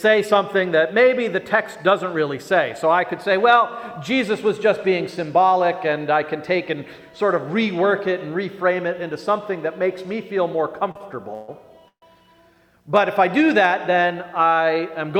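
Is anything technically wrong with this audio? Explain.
Yes. The clip has two short stalls from late packets and two call audio freezes, all between about 10.9 and 12.0 s.

Short stalls from a late packet occur back to back at 10.91–10.97 s and 10.97–11.02 s. In each, a packet missed its playout time and the jitter buffer ran dry. The receiver held the last sound for about 38 ms and then about 30 ms before resuming at the same point. The result is a briefly prolonged sound, nothing lost, and about 68 ms of added delay.

Call audio freezes follow at 11.34–11.50 s and 11.88–12.04 s, each lasting about 139 ms. In both, the last sound is continued and fades. In the second, it decays into about 90 ms of silence before the audio restarts. The likely cause is packets held up in transit, which emptied the buffer. Playback then picks up where it stopped, so the freezes insert gaps rather than removing content and add about 139 ms of delay each.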